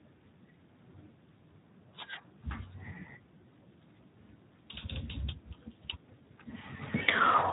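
Right from the start and all the way through, the speech carries Speex codec damage, and it's plainly audible. It sounds like a low-quality setting, around 11 kbps, so the excitation comes out hoarse and noisy. Nothing gets through above 3.8 kHz, which leaves it sounding dull and boxy.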